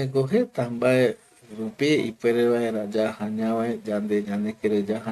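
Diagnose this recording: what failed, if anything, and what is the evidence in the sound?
Nothing in the signal chain points to a failure: the speech keeps a continuous, stable signal with no breaks, level jumps or added disturbances at any stage.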